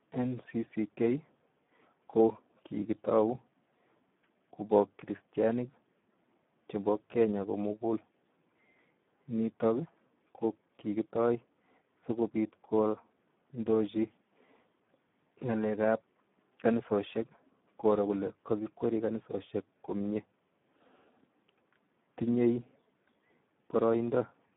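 A speech recording run through the Speex codec from start to finish, at heavy compression consistent with about 8 kbps. Too few bits for the excitation leave it hoarse and noisy, confined to a narrowband line of 150 Hz to 3.6 kHz, with nothing above 3.8 kHz.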